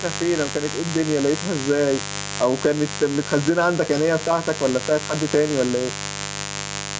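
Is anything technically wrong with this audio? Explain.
Yes, two faults run through the whole speech recording.

Mains buzz lasts from start to finish. Sharp switching spikes at twice the 50 Hz mains rate put a dense stack of 50 Hz harmonics into the signal, sitting only around 10 dB below the speech. The result is a raspy, continuous buzz. A spectrogram shows evenly spaced horizontal lines climbing into the kilohertz range, below the 8 kHz ceiling of the call's microphone processing.

Gain pumping is also present throughout. The level swings by roughly 5 dB, so everything sounds squashed. The likely cause is input gain set far too high, with a fast limiter pulling it down on each loud sound. On a waveform, the peaks look flattened and similar in height. The faint room noise sits about 35 dB below the speech.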